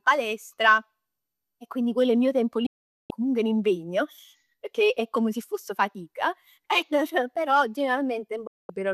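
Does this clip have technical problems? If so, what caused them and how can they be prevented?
Yes, there's a digital broadcast dropout, twice. Right after "è il mio tempo" the sound snaps to silence at 2.66 s and stays gone until 3.11 s, about 0.43 s, coming back on "comunque un impegno pecchè". A second hole runs from 8.47 to 8.70 s, about 0.22 s. Both cut in and out with a roughly 3 ms fade: the receiver stopped getting good frames and muted until valid ones arrived, so that stretch of programme is simply lost. Preventing it comes down to a stronger, steadier signal at the receiver: better antenna placement or gain, and less interference on the path.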